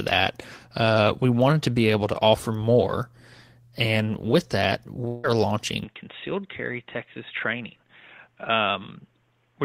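A speech clip with two faults. From 5.07 to 5.27 s the audio smears into a fading buzz that stands in for about 160 ms of lost sound, the likely mark of a long network dropout. Unlike a brief packet glitch, the concealment runs long enough to decay audibly. From 5.84 s to the end the sound turns dull and boxy, with nothing above 3.8 kHz, a drop of around 10 dB and a faint new noise floor, likely an input switched to a poorer device. It is a lasting change of tone with no gap at the switch, rather than a momentary filter.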